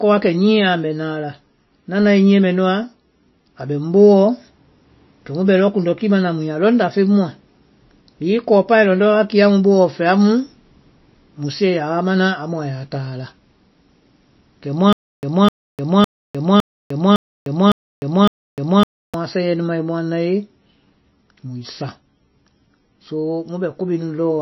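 From start to end the speech carries audible MP3 compression damage. Nothing is present above 5.8 kHz, so sibilants sound dull and clipped, and the remaining band has a watery, swirling texture where weak spectral components drop in and out between frames. Consonant onsets smear. The depth of the damage points to a very low bitrate, on the order of 24 kbps, with the encoder most likely starving the upper band and quieter detail to stay within budget.

From 14.93 s to 19.14 s the sound breaks into a stutter with silent gaps. A 255 ms fragment plays, then drops to digital silence for about 303 ms, and the same fragment returns on a steady 558 ms cycle, seven times in all. The likely cause is a stalled player or stream that replayed its last buffered chunk on each retry and then ran dry. The audio that should have filled this interval is missing.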